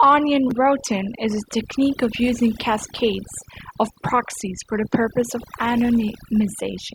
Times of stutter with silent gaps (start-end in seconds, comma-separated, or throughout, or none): none